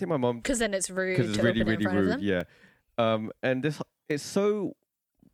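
A speech recording with a few samples likely dropped from the stream, a fraction of a millisecond each, so the waveform jumps and single sharp clicks sound at 0.97, 2.41, 3.28 and 4.11 s.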